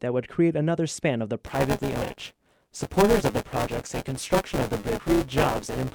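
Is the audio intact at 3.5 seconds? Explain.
No. Buffer tearing runs from 1.46 s, just after "another span of the", to the end. Writer and hardware have slipped, so roughly a third of each buffer replays audio about 15 ms old. The hard joins give a robotic 200 Hz buzz.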